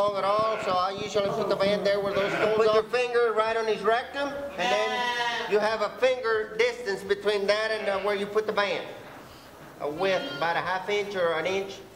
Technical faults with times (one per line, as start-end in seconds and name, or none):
0.08-2.74 train of clicks